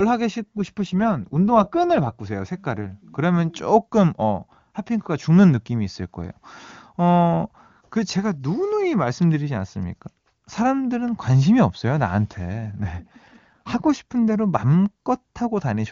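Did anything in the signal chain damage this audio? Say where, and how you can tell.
Yes. Network-ordered AMR rate drops at 0.42–2.20 s and 12.72–13.88 s roughen the speech without gaps, consistent with a switch from 23.85 to 8.85 kbit/s.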